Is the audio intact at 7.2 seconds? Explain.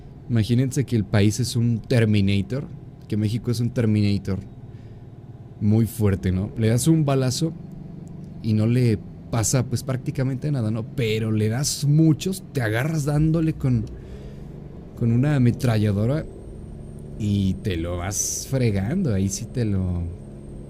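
Yes, the audio is intact at 7.2 seconds, with no dropout, click, distortion or other fault audible at that point.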